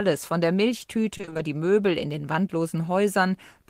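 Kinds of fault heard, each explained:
Repeated packet loss (robotic sound): from 1.17 to 1.41 s, packets kept arriving late or not at all, and each hole was patched by stretching out the sound just before it. About half a dozen short gaps, none longer than 20 ms, fall across that quarter-second, so roughly half of it, 120 ms, is concealment rather than real audio. The speech turns choppy there, with small pieces missing.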